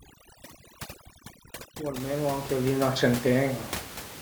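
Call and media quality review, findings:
Overdone noise removal, 0.0–2.0 s, ending just before "anche li 'na": background drops and breaks into twinkling specks. Suppressor set too strong, cutting bands near its noise estimate. Spectrogram: patchy holes, isolated bright dots between syllables.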